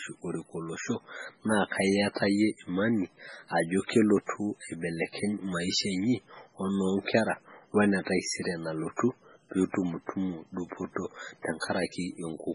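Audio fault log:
Throughout: MP3 compression, likely. Nothing above 10.4 kHz and heavy, watery swirl on the speech, which fits a very low bitrate near 16 kbps starving the encoder of bits.
8.97–8.99 s: pre-echo. A short hiss of about 26 ms precedes an attack, because quantisation noise spread across the block fills the quiet moment before it.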